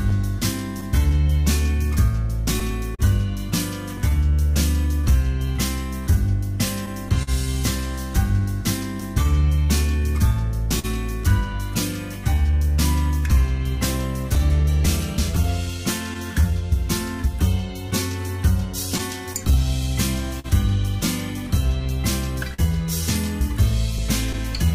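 Clock drift between sender and receiver runs through the whole recording: the sending device's clock runs roughly 3% slow relative to the playback side, so the receiver's jitter buffer keeps draining faster than it is refilled. The receiver has to keep manufacturing a little extra audio to stay fed, and the underlying drift is what drives all of the timing faults below, from the first seconds to the end.

The repeated timing corrections that result span 0.39 s to 24.66 s. The receiver repeatedly inserts short duplicated slices of sound, stretching playback to about 99% speed and adding roughly 300 ms in total. Every edit goes the same way, lengthening rather than shortening, but the spacing is irregular. That irregularity gives the sound a faintly unsteady pace, with occasional small hiccups where a slice repeats.

There are two short stalls from a late packet. The first runs from 2.95 s to 3.01 s, where the buffer ran dry and the last sound was held for 38 ms until the packet arrived. 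The second, at 10.79 s to 10.85 s, is held for 43 ms. In both cases playback resumes from the same point with nothing lost, but the sound briefly hangs with a slight buzzy or dipped quality.

Scattered short gaps appear in two stretches. Between 6.86 s and 9.03 s there are about three gaps, concealed by extending the preceding sound, amounting to roughly 70 ms in total with the longest around 40 ms. Between 14.35 s and 24.36 s there are around fifteen gaps totalling about 200 ms, the longest near 50 ms. No audio is missing, but these show up as brief ticks and smears.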